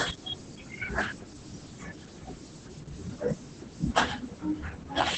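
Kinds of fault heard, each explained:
Opus voice compression: The speech runs through a low-rate linear-prediction voice coder with coarse excitation, which leaves it muffled, hoarse and slightly robotic throughout. Nothing is heard above 8.7 kHz, consistent with wideband SILK coding at roughly 10 kbps, and the damage is heavy.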